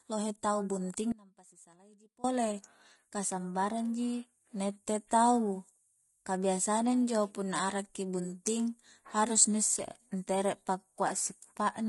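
Right from the start, the speech has that rough, grainy texture you get from low-delay AAC compression, most likely AAC-ELD at something like 32 kbps. The short frames don't resolve the pitch harmonics cleanly, so noise creeps in between them, and at a bitrate that lean the top band comes across as thin and a bit synthetic. The damage is plainly audible throughout, not just on the harder passages.

Then at 1.12 s, right after "lohe tau bunting", the sound drops out abruptly and stays gone until 2.24 s, a little over a second. It isn't dead silence. What's left is a faint trace sitting roughly 25 dB below normal level, which suggests the path downstream stayed live while the wanted signal was cut off upstream. That makes it an audio dropout to a faint residue. The hard edges at both ends set it apart from a natural pause or a fade.

Near the end, just after "harus ni isse ntere", there's a brief smeared, noisy blip from 11.07 to 11.11 s. 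That's AAC frame loss with concealment. About 20 ms of audio went missing, which fits a single lost frame, and the decoder patched the hole by reusing the last good spectrum. Because the loss is so short, the patch comes across as a quick phasey smudge rather than a gap.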